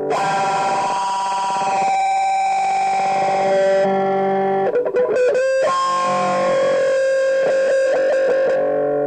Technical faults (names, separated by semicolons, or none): damaged data in a compressed stream